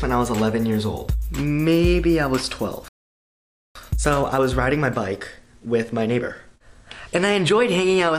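At 2.88 s the audio just drops out for about 0.87 s, until 3.75 s. That's a playback stall, likely the player running dry on data. Right after, from 3.75 to 6.75 s, there's time-compressed catch-up: the sound runs about 1.25 times fast at normal pitch.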